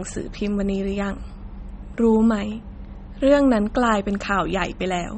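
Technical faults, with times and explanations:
Throughout, MP3 compression: the sound has plainly audible codec damage and nothing above 8.4 kHz. The likely cause is a starved MP3 encoder, fitting roughly 32 kbps. It cut the treble and dropped weak frequency lines, giving a watery, swirling texture.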